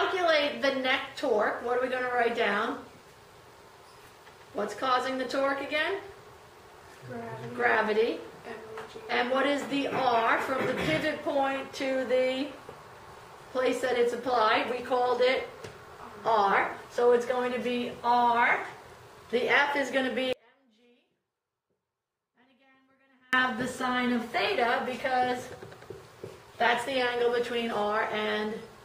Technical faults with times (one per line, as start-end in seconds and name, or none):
20.33-23.33 audio dropout to a faint residue